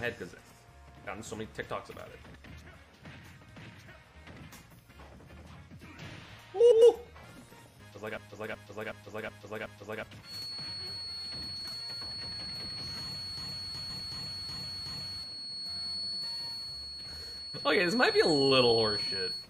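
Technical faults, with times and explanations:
2.24–2.46 s, 6.60–6.82 s, 11.80–12.02 s and 13.79–14.01 s: frames out of order. Each stretch of about 0.22 s plays with its two halves exchanged. Two neighbouring blocks of 104.5 ms, which fits runs of four codec frames each, were decoded in the wrong order. The result is a short garbled flutter. Nothing is missing, only reordered, so the timing after each event stays intact.
8.17–10.03 s and 13.38–15.23 s: system hang loop. In each span a single 0.37 s piece of audio repeats five times, at about 2.69 repeats per second, giving a skipping-record effect. The host or driver stalled while the output hardware kept replaying the same ring buffer, whose length fits a 16384-sample buffer. Roughly 2 s of program is lost each time, and the audio resumes further along once the system recovers.
10.2 s to the end: feedback whistle. A thin, steady tone at 4.4 kHz sits about 5 dB below the signal and swells and fades slowly in level. 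The likely cause is a loudspeaker-to-microphone path running right at the edge of feedback. There the loop gain at that one frequency is just high enough to sustain a tone without building into a runaway howl, so it lingers behind the sound instead of growing.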